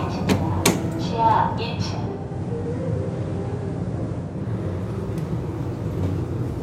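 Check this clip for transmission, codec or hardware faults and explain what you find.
One fault is audible: digital radio blending to analogue, from 2.05 to 4.50 s. The receiver lost its digital stream and cross-faded over 349 ms to the station's FM broadcast, then back. During that stretch the level drops by about 1 dB, and hiss rises to roughly 35 dB below the sound.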